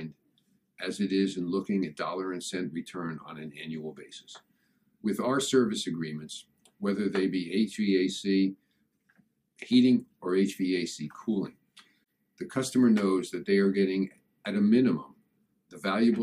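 No technical faults are audible.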